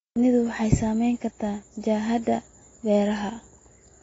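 The speech sounds dull and smeared from start to finish, with nothing above 7.6 kHz and a warbly, fizzy texture on sibilants and held sounds that is plainly audible throughout. This is likely AAC compression at a low bitrate. AAC-LC quantises each frame's spectrum against a hearing model, and when bits are scarce it drops the top band and leaves gaps elsewhere. The damage here points to a bitrate of around 24 kbps.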